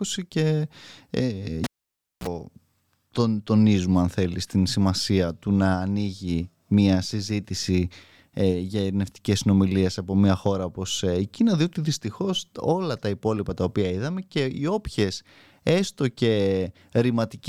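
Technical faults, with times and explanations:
1.64–2.28 s, cable pulled and plugged in: a pop as the live cable comes out, about 0.59 s of near silence while it hangs free, then roughly 43 ms of 60 Hz mains buzz as only the plug tip makes contact, and a second pop when the speech returns.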